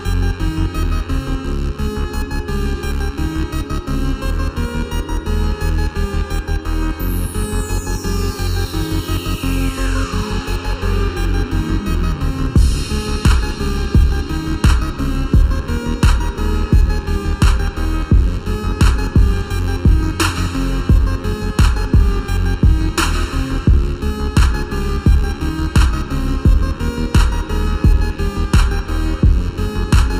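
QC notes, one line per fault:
Throughout: channel delay (comb filtering). One side of the original pair arrives roughly 0.7 ms late, and when the two are folded to mono the shared content cancels at evenly spaced frequencies, starting near 700 Hz and repeating about every 1.4 kHz. The result sounds hollow and phasey, with fixed notches. On a spectrogram this appears as thin dark horizontal bands at those regular intervals, steady for the whole clip. The waveform shows no obvious sign.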